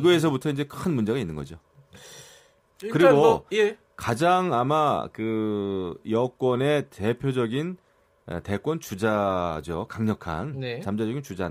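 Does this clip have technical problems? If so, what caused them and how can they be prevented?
Yes. From 0 to 2.88 s the speech carries crude rate conversion. A gritty, inharmonic fizz rides on the louder and brighter sounds. Samples were picked to the nearest position, without filtering. The timing error repeats in a fixed pattern, which fits a 48 kHz to 44.1 kHz change. That pattern creates shifted, inharmonic copies of the speech, roughly 30 dB below it. Using a proper band-limited resampler would prevent it.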